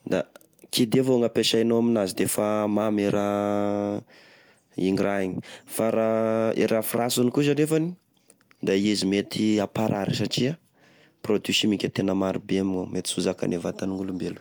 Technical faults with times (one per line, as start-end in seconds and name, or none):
none